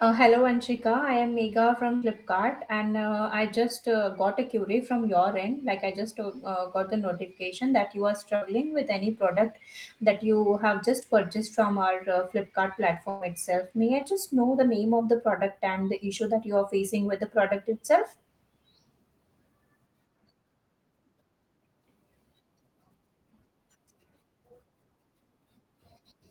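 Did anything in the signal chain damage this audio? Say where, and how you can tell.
Yes. The damage happened in the network stage: bursts of packet loss at 1.95 to 2.04 s, 8.36 to 8.43 s and 13.09 to 13.23 s. In each, the receiver stretched the last sound into a held, fading tone for about 60 ms (about 110 ms in the third) instead of going silent. Speech then picks up further along, with about 60 ms or 120 ms of material skipped. A plain dropout would leave a hard gap of silence. These have no silence, and speech is missing when it resumes.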